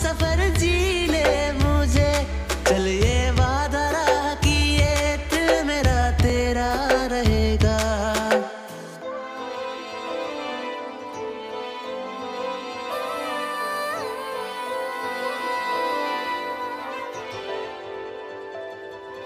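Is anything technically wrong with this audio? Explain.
Yes. At 6.30 s there's a repeated buffer: a tiny chunk, consistent with a 128-sample buffer of about 3 ms, plays twice when fresh audio arrives late, giving a quick click.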